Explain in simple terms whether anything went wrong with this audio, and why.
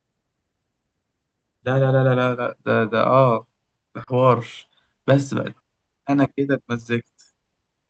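Around 4.03 to 4.10 s there's a short concealed packet loss: about 40 ms never arrived, so the receiver stretched the previous sound to cover it, leaving a quick smear.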